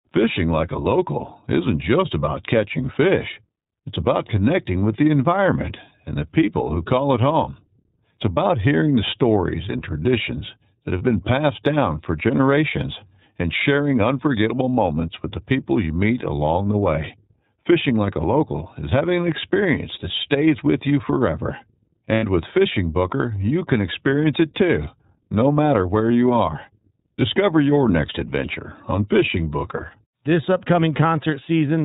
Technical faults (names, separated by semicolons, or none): iLBC codec; lost iLBC frames